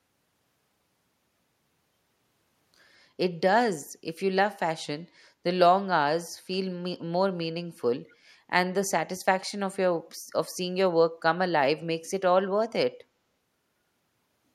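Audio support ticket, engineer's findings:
Echo leak, 8.08–8.13 s: brief, very faint delayed copy of the speech, lagging about 215 ms. Likely residual from the far end's echo canceller after loudspeaker pickup.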